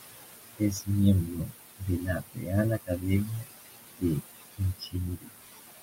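Throughout, the background noise ducks away between phrases and swells back under the speech. These are noise suppressor artifacts: the processor pulls steady-noise bands down by about 18 dB, working on room noise that sits only about 10 dB below the speech.

At 0.58 to 0.88 s, 1.26 to 1.53 s, 2.0 to 2.51 s, 2.78 to 3.06 s, 3.25 to 3.52 s, 4.57 to 4.95 s and 5.16 to 5.35 s, soft parts of the speech sound swallowed, dropping by about 13 to 21 dB. This is speech cut by the noise suppressor, which misreads quiet speech as noise and removes a fraction of a second each time.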